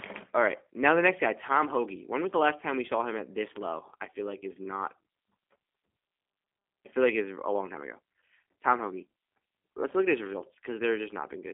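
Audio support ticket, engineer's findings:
G.729 codec (G.729A) throughout, 0 s to end. Speech rough and slightly synthetic, narrow telephone tone. Probable component: VoIP leg encoding at 8 kbit/s. Rebuilt from filter, pitch predictor and sparse pulses. Spectrogram: band about 250 Hz to 3.5 kHz, hard ceiling, nothing above 3.6 kHz.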